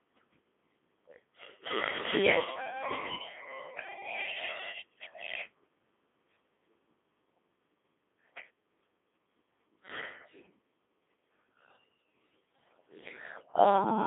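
Throughout, the speech passes through a Codec 2 vocoder, heavily damaged: it is resynthesised from pitch, voicing and envelope, so it sounds robotic and buzzy, unlike a plain telephone filter. The band runs from 250 Hz to 3.6 kHz, with nothing above 3.8 kHz, which fits a 2.4 kbit/s mode.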